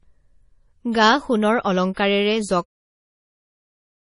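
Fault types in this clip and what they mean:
MP3 compression: Heavy lossy coding is the likely cause of the damage heard throughout this speech. Nothing remains above 10.6 kHz, so the treble sounds cut off. Weak detail flickers in and out, giving a watery, swirly texture. The damage fits a low bitrate of about 32 kbps.
Pre-echo: A short hiss comes just before a sharp attack, from 2.85 to 2.89 s. That is about 39 ms. The codec spread noise sized for the loud onset across its whole block, so the quiet moment before it fills with hiss. The attack sounds softened.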